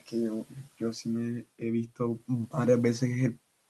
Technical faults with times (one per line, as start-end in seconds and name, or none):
0.45-0.81 speech cut by the noise suppressor